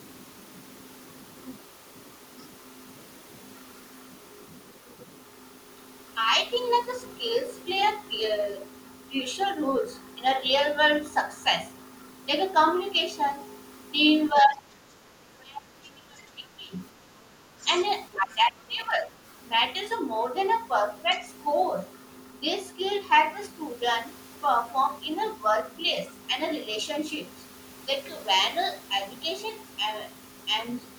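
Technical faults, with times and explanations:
14.32–14.9 s, 15.41–16.78 s and 18.15–19.19 s: speech suppressed in double talk. The talker's speech sinks in level in three stretches, by about 15 dB in the first, about 25 dB in the second and about 10 dB in the third. The middle dip is the longest, lasting around one and a half seconds. The likely cause is an echo canceller that could not tell the near talker from loudspeaker echo while both sides spoke, and attenuated everything.
17.6–17.65 s, 18.14–18.2 s and 21.13–21.19 s: other side's voice leaking through. Brief, faint scraps of a second voice appear in the microphone signal, sitting roughly 20 to 25 dB below the main speech. Each lasts only about 50 to 60 ms. The likely cause is the far end playing from the device's loudspeaker, with the echo canceller failing to remove all of it from the pickup.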